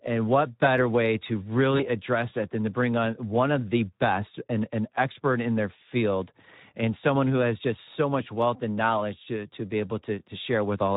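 Throughout, the speech carries plainly audible Speex codec damage: a hoarse, noisy texture, consistent with roughly 11 kbps. With so few bits for the excitation, harmonics look smeared and grainy on a spectrogram, and any content above 4 kHz appears as diffuse, noise-like fill.

From 1.77 to 1.87 s comes VoIP packet loss concealed by the speech codec. The gap points to a single lost 20 ms frame. The decoder repeated its last pitch and filter, giving a brief stretched sound that fades. The waveform dips before recovering.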